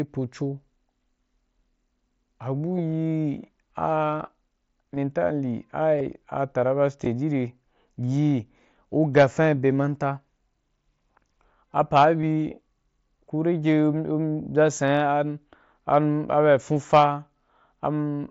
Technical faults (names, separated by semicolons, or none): concealed Bluetooth headset packet loss; hard clipping